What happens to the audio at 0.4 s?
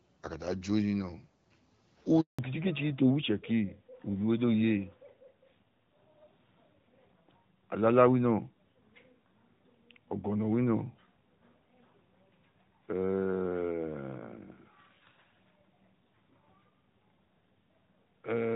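Nothing goes wrong at 0.4 s: the speech there passes through intact, carried by the AMR wideband (HD Voice) codec at 12.65 kbit/s with only the light coding character that rate leaves.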